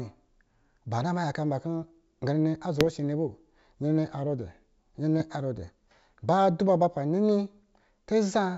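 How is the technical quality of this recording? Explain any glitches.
The speech, carried by G.722 wideband telephone coding with content up to about 7 kHz, has two brief glitches.

At 2.81–2.90 s and 5.20–5.30 s there are bit errors on an ADPCM link. Flipped bits derail the decoder's step size and predictor, producing pops and rough bursts. These show as jagged waveform spikes and broadband vertical smears.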